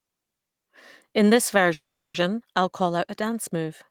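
In this speech clip, from 1.73 to 2.16 s the last sound smears into a short fading buzz, then about 340 ms of silence, before "I'll call out a" resumes intact. This is a call audio freeze, likely from delayed packets draining the jitter buffer, which adds a 410 ms gap without losing any audio.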